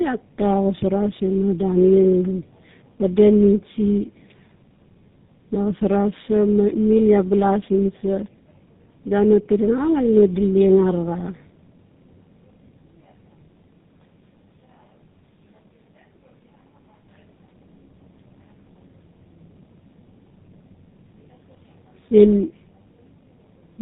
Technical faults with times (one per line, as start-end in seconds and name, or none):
0.00-23.81 tandem speech coding